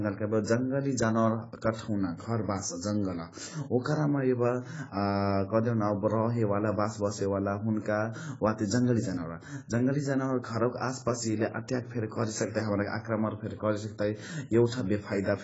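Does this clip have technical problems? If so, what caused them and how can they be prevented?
Yes. Throughout the speech there is heavy damage consistent with AAC compression, likely from AAC-LC at a very low bitrate, around 16 kbps. Nothing is heard above about 7.7 kHz, so the speech sounds dull, and sibilants and held vowels take on a fizzy, warbling texture. A plain low-pass filter would remove the top without that swirling texture. To prevent it, encode at a higher bitrate or send the audio uncompressed.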